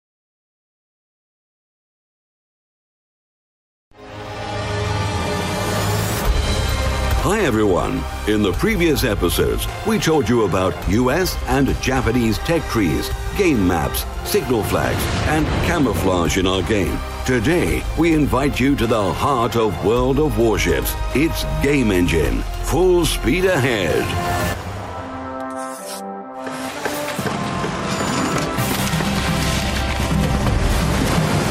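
From 24.56 s to the end at 31.5 s, the audio carries a resampler restarted on every block. Each 40 ms block was converted in isolation, consistent with a 44.1 kHz to 48 kHz conversion, so the interpolation filter lacked true neighbouring samples at every block edge and left a small discontinuity there. The result is a steady 25 Hz stream of ticks, close to a rough buzz, riding on the signal.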